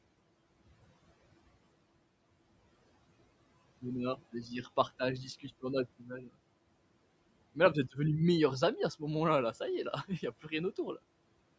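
At 5.99 to 6.36 s the noise suppressor misjudged part of the speech as background and turned it down along with the room noise, a dip of about 18 dB over roughly a third of a second. The affected sounds come out swallowed and faint.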